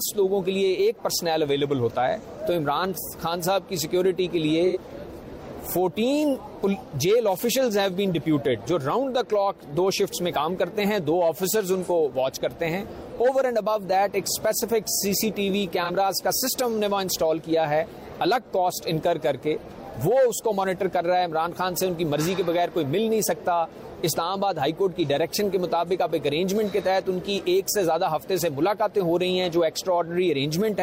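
At 4.66 s an AAC frame loss with concealment leaves a gap of about 85 ms, which fits two lost frames, and the decoder fills it by reusing the last good spectrum, giving a brief smeared, noisy patch rather than silence. The same happens again at 15.84 s, this time about 43 ms, consistent with a single frame, heard as a shorter phasey blur before the sound resumes cleanly.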